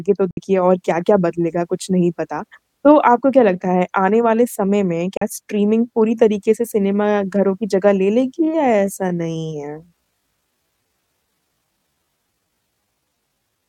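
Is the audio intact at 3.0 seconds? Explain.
Yes, the speech plays through 3.0 seconds intact, with no fault at that moment.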